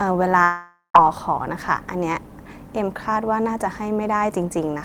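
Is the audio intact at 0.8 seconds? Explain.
No. From 0.43 to 0.95 s the speech turns into a fading, buzzy smear of the last sound, then a short silence, and resumes with about 0.51 s lost. A long network dropout is the likely cause, with the receiver filling in for audio that never arrived.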